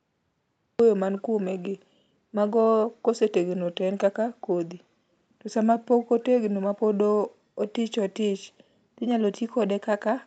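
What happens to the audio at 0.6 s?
At 0.6 s the clip is still in digital silence, part of a cut-off start that runs from 0.0 s to 0.8 s. Capture began late, so nothing was recorded before that point. At about 0.8 s the speech jumps straight in mid-sound, with no natural attack or fade-in. The first audible syllable is truncated rather than building up from quiet.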